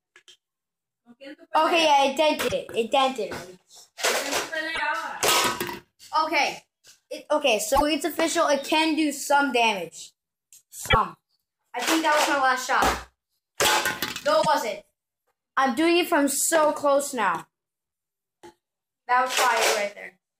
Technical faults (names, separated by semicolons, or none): damaged data in a compressed stream; CD scratch ticks